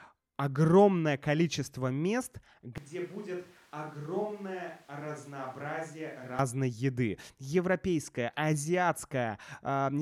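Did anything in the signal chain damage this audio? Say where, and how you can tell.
Yes, a switch to a distant microphone at the analogue capture stage. From 2.78 to 6.39 s the speech suddenly turns roomy and hollow, thinner in the bass, drops about 10 dB, with noise only around 25 dB under it. That's likely the close mic dropping out and a far-off one taking over.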